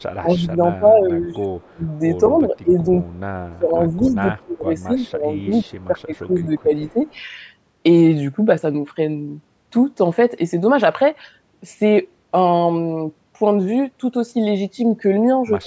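From 0.0 to 1.92 s the speech dips and breaks into pieces, falling by up to about 25 dB. This is speech suppressed in double talk, likely an echo canceller ducking the near talker while the far side spoke. On a waveform the envelope collapses in patches, and a spectrogram shows thinned upper harmonics.

At 1.22 to 1.35 s a faint delayed copy trails the voice, about 30 dB down and 210 ms late. This is an echo leak, likely loudspeaker pickup the canceller failed to remove. It shows as ghost harmonics offset in time.

Between 2.25 and 2.62 s the leak is stronger, at about 15 dB below the speech. Suppression follows from 2.41 to 2.89 s with a shallower dip of about 15 dB.

At 3.08 to 3.2 s a brief faint echo appears, about 35 dB down.

From 3.46 to 7.04 s the voice is repeatedly pulled down by about 20 dB. Overlapping that stretch, from 5.41 to 7.18 s, an echo about 30 dB down runs underneath at the same 210 ms lag, visible as faint doubled striations.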